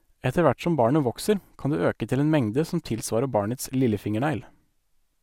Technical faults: none

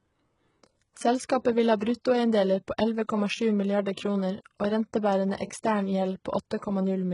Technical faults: HE-AAC compression

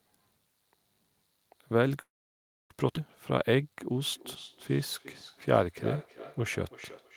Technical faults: call audio freeze; skip ahead; jitter buffer slow-down; feedback echo between two devices

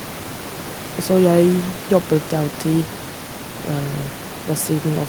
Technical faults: none

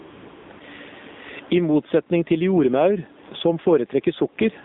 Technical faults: gain pumping; AMR narrowband mobile codec; AMR comfort noise

